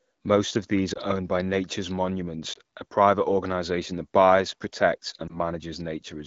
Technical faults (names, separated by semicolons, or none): lost AMR speech frames